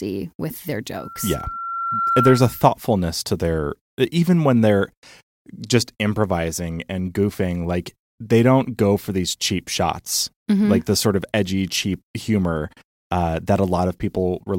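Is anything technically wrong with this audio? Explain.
Yes. From 0.96 to 2.68 s, between "with their" and "to their even when", there is loudspeaker feedback squeal. The microphone is picking up its own loudspeaker, and at about 1.4 kHz the loop gain exceeds one, so that tone grows over roughly a second until it sits around 5 dB above the speech. It differs from a steady interference whistle because it swells from nothing rather than appearing at full strength.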